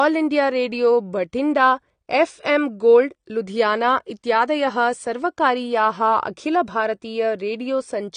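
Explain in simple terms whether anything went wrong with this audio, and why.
Yes, something went wrong, and it lasts the whole clip. The speech sounds dull and muffled, with a warbly, fizzy edge on hissing sounds like s and sh. Nothing is left above about 9.7 kHz, so the crisp top end is gone. This is most likely AAC compression squeezed too hard: the encoder saves space by throwing away high frequencies and coarsely approximating the rest, which smears the detail.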